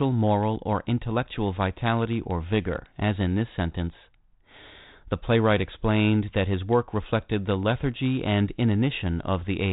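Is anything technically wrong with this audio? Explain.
No, nothing in this speech recording stands out as a technical fault. It carries the sound of G.726 ADPCM telephone coding at 32 kbit/s: the audio stops at about 4 kHz and there is only a light trace of the coder's grain, as expected from that rate.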